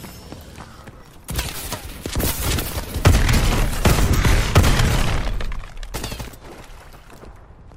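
Nothing is technically wrong with the clip, as no faults can be heard anywhere in the audio.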